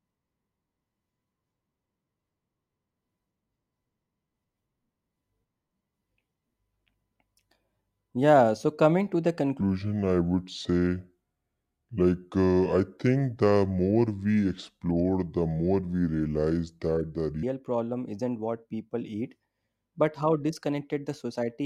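At 9.61 s, right after "so coming to the", the speech drops into a section at the wrong speed that runs until 17.43 s, where "problem isn't what people" picks up at normal pace. Through that stretch it plays at about 0.72 times its proper rate, so everything drags and sits roughly five semitones lower, turning the voice deep and sluggish. The switch is abrupt at both ends, likely from that part being played back against the wrong clock.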